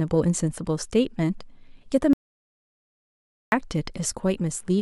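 It's a short speech recording with one clear problem: an audio dropout to silence running from about 2.13 s to 3.52 s. The sound cuts off abruptly mid-flow and comes back just as suddenly, and the gap in between is dead digital silence, with no room tone at all. That points to the input likely going missing, through a lost connection or a stray mute, while the recorder kept writing silence, so roughly 1.4 s of speech is simply gone.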